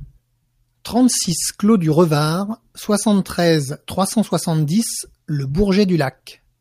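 No technical faults are audible anywhere in this speech.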